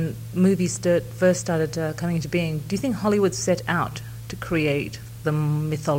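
A steady, even hiss sits under the sound from start to finish, with no grit or distortion on the signal itself. This is low bit depth with dither: the audio has been reduced to about 7 bits, and dither was added before rounding, so the quantisation error is spread into flat white noise rather than clinging to the waveform. The noise floor is high, roughly 25 dB below the signal, and does not change level or colour.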